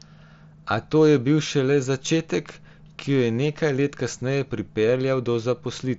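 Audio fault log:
Nothing to log here: the speech comes through a Bluetooth mSBC headset link, and there's no fault to flag anywhere in the clip.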